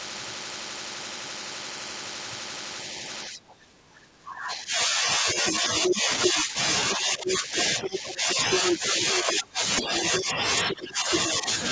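From 3.06 s to 11.49 s the talker's speech keeps sinking, in dips that reach roughly 20 dB down and add up to about 7 seconds. This is speech suppressed in double talk, likely an echo canceller that could not tell the talker from loudspeaker echo and pulled everything down.

That other voice is the second fault: the other side's voice leaking through, from 5.46 s to 10.1 s and again from 10.69 s to 11.16 s. It sits at roughly the same loudness as the talker, so it competes rather than hanging faintly behind. It is likely loudspeaker playback that the canceller failed to remove. It is a separate voice overlapping the talker, not a delayed repeat of the talker's own words as in ordinary echo. Like the rest of the audio on the call path, it has nothing above 8 kHz.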